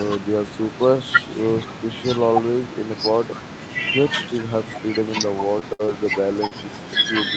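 A speech recording carried over an Opus call path, whose spectrum stops at 8 kHz, with a cluster of network damage late in the clip. Short concealed packet loss appears at 5.59–5.63 s, 5.85–5.90 s and 6.47–6.53 s, where 20 to 40 ms of audio never arrived and the decoder extended the preceding sound. Each shows as a brief smear or wobble, and on a spectrogram as the preceding sound running on before blending back. A burst of packet loss spans 5.73–5.93 s. About 60 ms was lost, and the receiver filled it with a fading continuation before resuming later in the sound, with a net 10 ms added. The waveform shows a decaying stretch before the audio resumes. Lost packets rebuilt from error correction occur at 5.79–5.81, 5.88–5.90, 6.31–6.33 and 6.37–6.39 s. These are 20 ms frames replayed from low-bitrate redundant copies, so they leave no gap. They sound rougher and show as noisier, blurred patches in the spectrogram.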